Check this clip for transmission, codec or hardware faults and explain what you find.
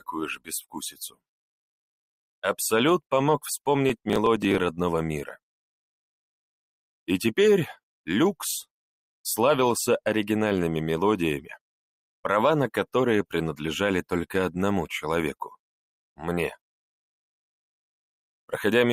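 Two faults here, both early on. From 0.34 to 1.2 s the noise suppressor cuts the sound, treating it as noise and pulling it down by up to about 21 dB for roughly half a second in total. From 3.9 to 4.58 s there's processor overload crackle: a gritty tearing from a run of tiny skips, which fits a dozen or more very short buffers, each around a millisecond and a half, being missed and dropped.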